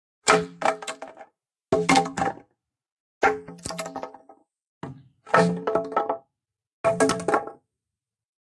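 No technical faults can be heard anywhere in this audio.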